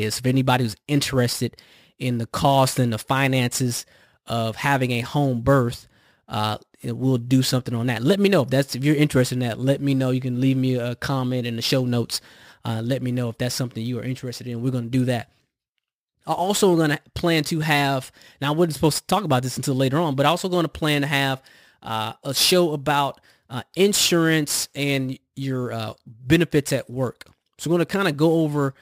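Sample clock jitter runs throughout: an unstable converter clock, around ten microseconds of timing error, adds hiss roughly 20 dB below the speech, strongest on loud, bright passages.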